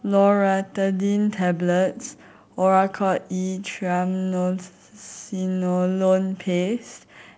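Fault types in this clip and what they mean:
Nothing stood out on listening to this speech clip, which comes across as wideband telephone audio with only a faint hiss in the upper band.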